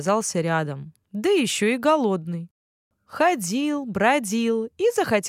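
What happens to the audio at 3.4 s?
Nothing goes wrong at 3.4 s; the speech carries on intact through that moment, with no dropout, click, glitch or other technical fault.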